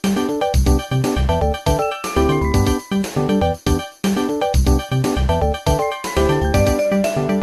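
Nothing here sounds off at any point; there's no technical fault to point to anywhere in the clip.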